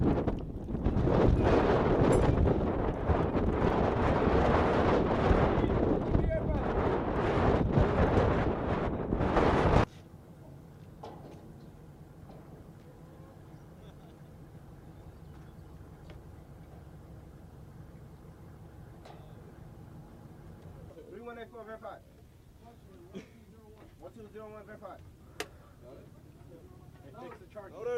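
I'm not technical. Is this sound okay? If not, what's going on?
Yes, nothing in this audio points to a technical problem: the signal holds steady with no gaps, glitches or distortion anywhere along its run.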